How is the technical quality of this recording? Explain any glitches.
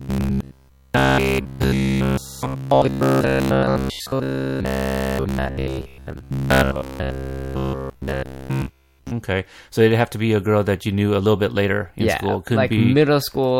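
The recording has a serious fault over its first nine seconds. From 0.02 to 9.11 s there is robotic sound from repeated short buffers: audio likely arrived too slowly, so a roughly 15 ms chunk was replayed over and over, imposing a fixed 66.7 Hz buzz that turns the speech rigid and metallic.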